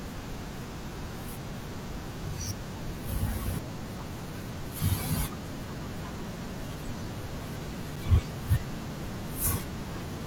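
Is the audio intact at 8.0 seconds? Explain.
No. Right around that moment, at 7.96 s, there is a gap between stream segments. The timestamps of two consecutive segments, which fit a 2-second segment length, fail to meet, so the player inserts about 6.6 ms of silence. This cuts a brief, hard-edged hole into the speech, though no audio is actually lost.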